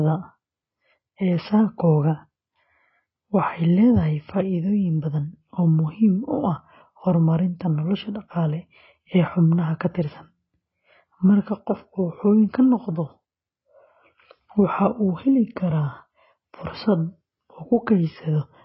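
Throughout, the speech sounds dull, with nothing above 5.5 kHz and heavy codec damage, likely from AAC compression (AAC-LC) at a bitrate around 16 kbps.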